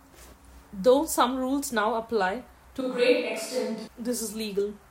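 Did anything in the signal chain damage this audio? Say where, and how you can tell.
Yes. From 2.81 to 3.87 s the speech abruptly turns roomy, hollow and bass-light at about the same level, then snaps back. This is likely a switch to a distant microphone at capture.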